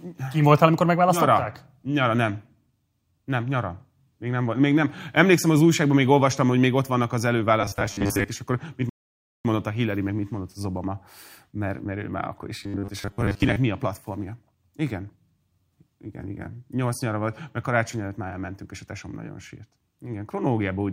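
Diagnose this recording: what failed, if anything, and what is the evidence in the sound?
Robotic sound from repeated short buffers appears from 7.61 to 8.31 s and again from 12.63 to 13.57 s. The speech becomes a rigid metallic buzz at 100 Hz, which fits a 10 ms segment being replayed. Roughly half the audio is repeated rather than new, likely because of buffer underruns in the driver or buffer stage.

A rebuffering stall in playback runs from 8.90 to 9.45 s. The sound drops to silence and then resumes exactly where it stopped, with nothing skipped. The player ran out of downloaded audio and waited for more, adding about 0.55 s to the timeline.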